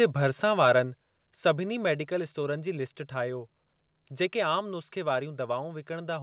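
From 0.63 to 0.72 s, microphone overload: input gain was likely set too high, so peaks about 3 dB over full scale were flattened, adding a harsh, crackling edge. The software then likely stepped the microphone volume down three times. At 1.02 s it dropped about 4 dB, and at 2.04 and 4.59 s about 2 dB each, so the speech and background abruptly become quieter. Across the clip, the call path's bandwidth stops at 4 kHz.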